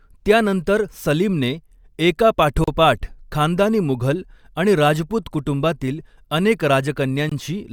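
At 2.64 s the speech drops out for about 36 ms, then again at 7.29 s for 22 ms. Both are gaps at a join of encoded pieces: the audio was encoded in separate chunks and stitched together without trimming the encoder's start-up delay and end padding. You hear a brief hole with smeared edges, and then the speech picks up right where it left off.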